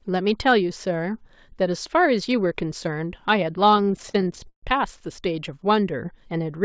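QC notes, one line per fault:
3.72–5.02 s, repeated stalls (stutter): the speech keeps catching and dragging across this span as packets arrive late and the jitter buffer runs dry over and over, about two dozen times. Each time the receiver stretches the last sound to cover the wait, fading it on the longer holds, the longest about 132 ms. Roughly 0.37 s, a little over a quarter of the span, is filled this way. Nothing is lost, but the rhythm stumbles. The audio stops at 8 kHz, which fits a wideband call codec such as G.722.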